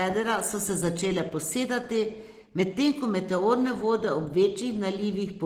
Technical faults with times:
0.00-5.46 Opus compression

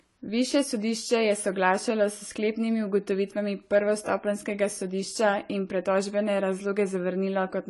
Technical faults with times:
0.00-7.70 AAC compression

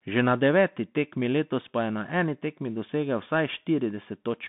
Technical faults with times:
0.00-4.48 Bluetooth CVSD headset codec

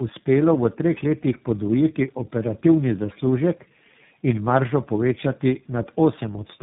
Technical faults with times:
0.00-6.62 tandem speech coding

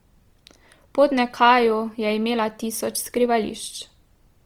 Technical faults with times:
0.00-4.46 Opus compression

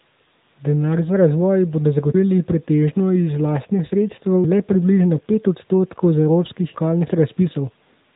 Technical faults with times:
0.00-8.15 AMR narrowband mobile codec
4.44 audio missing between chunks

